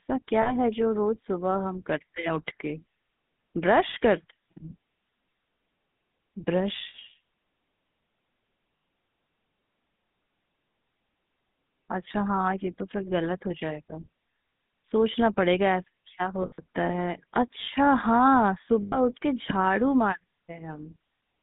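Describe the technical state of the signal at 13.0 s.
At 13.0 s the speech carries GSM full-rate codec damage, present throughout the clip. A vocal-tract model driven by sparse regular pulses, consistent with a 13 kbps GSM full-rate stream, leaves a plainly audible buzzy, gravelly roughness, and the band is confined to 150 Hz–3.7 kHz.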